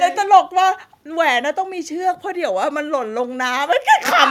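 At 0.36 to 0.38 s the speech has a brief harsh, crackling edge where the waveform peaks are flattened. The likely cause is microphone overload: the input gain was set high enough that the loudest moment drove the signal about 1 dB past the converter's ceiling, so the tops of those peaks were cut off. Only a small fraction of the samples in that span, roughly one in twenty, are clipped, so the distortion is short and sharp rather than sustained.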